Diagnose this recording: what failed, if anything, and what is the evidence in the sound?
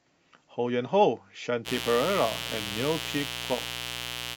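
The analogue wiring failed: a dimmer, rectifier or unshielded run is injecting sharp switching spikes twice per 60 Hz cycle. From 1.64 s to the end, a steady raspy mains buzz sits not far below the speech, its harmonics reaching into the kilohertz range.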